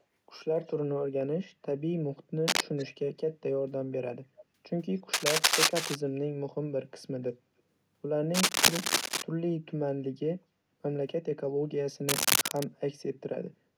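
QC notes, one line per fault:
0.63–0.74 s, 2.77–2.85 s and 4.38–4.43 s, echo leak: A faint, delayed copy of the speech returns in short scraps. Each copy trails the original by about 0.29 s. The first is very quiet. The one near 2.8 s is the loudest, roughly 20 dB under the speech. The one near 4.4 s sits a little lower. The likely cause is a far-end loudspeaker whose echo canceller let part of its microphone pickup through and sent it back.
2.48–2.66 s, 5.13–5.96 s, 8.34–9.22 s and 12.09–12.66 s, cable scratch noise: Dense, uneven bursts of scratching and rustling sit over the sound. They are a little louder than the speech itself. The first burst is brief. The later three each last over half a second. This most likely comes from a worn cable, connector or control being moved, so its contact resistance jumps about rapidly and injects crackly noise.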